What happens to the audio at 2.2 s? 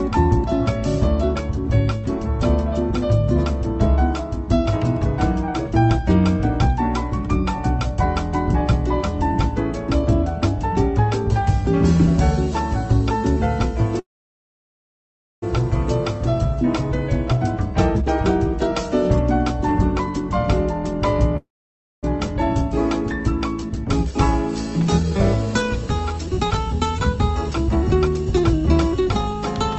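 Nothing goes wrong at 2.2 s; the audio runs on intact through the call path there, with no dropout, click or other fault at that moment.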